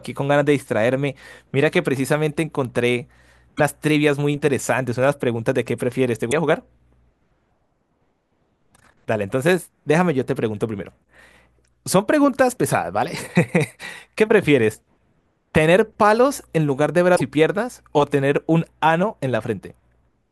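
At 3.57 to 3.61 s, 6.30 to 6.33 s and 17.15 to 17.21 s the speech skips forward with a brief garbled disruption. The likely cause is a broken MP3 bit reservoir: frames were lost, so the next frame reached back for borrowed data and decoded bytes from an unrelated frame instead. Each disturbance lasts one to three frame lengths, which fits a 24 ms MP3 frame.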